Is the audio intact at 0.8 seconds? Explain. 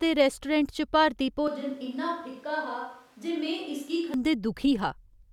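Yes, the speech at 0.8 seconds is intact, with no dropout, click, distortion or other fault at that moment.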